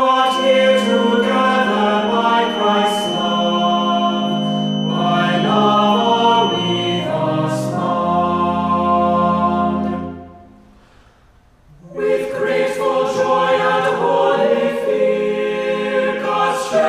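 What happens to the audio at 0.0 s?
A loudspeaker-to-microphone loop likely held right at the edge of feedback, sustaining one frequency without tipping into a runaway howl. The result is a feedback whistle from 0.0 s to about 7.14 s: a thin, steady tone at 3 kHz sitting roughly 10 dB beneath the main sound, swelling and fading slowly in level as the loop gain drifts, then disappearing.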